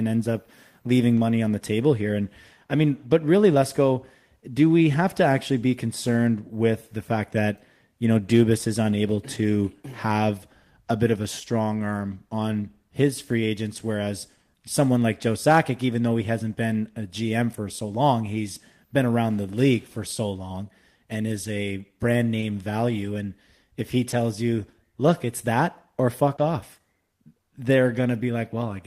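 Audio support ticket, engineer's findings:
Short concealed packet loss, four events in the speech: 1.15–1.21 s, 22.40–22.44 s, 24.10–24.14 s, 26.36–26.40 s. Brief smear or wobble at each. Component: receiver jitter buffer and decoder concealment. About 20 ms of audio arrived too late each time. The decoder bridged the hole by extending the preceding sound, then blended back into real audio. The first event also adds about 10 ms of delay.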